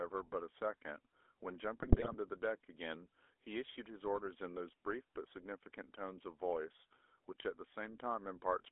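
A speech recording carried through the GSM full-rate codec for its whole length. The sound is squeezed into a telephone band of roughly 300 Hz to 3.5 kHz, and the codec damage is plainly audible as a buzzy, gravelly roughness. This comes from rebuilding the voice as a vocal-tract filter driven by a sparse, regularly spaced pulse excitation, which fits a 13 kbps full-rate stream. On a spectrogram the energy stops flat at 3.5 kHz with an empty region above it, and the low end is thinned below 300 Hz. Within the band, harmonics look coarse and grainy rather than smooth. From 1.81 to 2.15 s GSM bit errors break the sound into squawks, pops and gargling. Corrupted filter, pitch and gain values make the decoder produce wrong spectra and sudden level jumps frame by frame, which points to a bit error rate of a few percent over a short run of frames. The waveform shows abrupt amplitude spikes and blocky discontinuities in that span, and the spectrogram shows frame-length blocks of smeared, misplaced energy.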